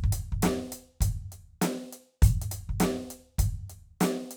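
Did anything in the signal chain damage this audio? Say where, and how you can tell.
No, nothing in the signal chain audibly damages this music; the level, timing and frequency content stay intact throughout, with no stage leaving a mark on the sound.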